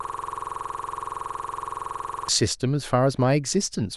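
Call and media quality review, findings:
System hang loop, 0 to 2.29 s, already under way at start: 46.44 ms slice repeating at 21.5 Hz buzz; frozen driver replaying a 2048-sample ring buffer. Waveform shows identical blocks, spectrogram regular vertical stripes.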